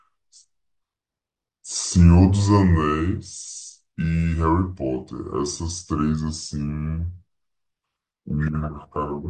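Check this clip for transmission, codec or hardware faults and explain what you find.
One fault runs through the whole clip: a wrong sample rate. The speech plays at 0.726 times its proper speed with no rate conversion, which fits 44.1 kHz audio clocked out at 32 kHz. Speed and pitch fall together, about 5.5 semitones lower, so the voice sounds low, slow and dragged.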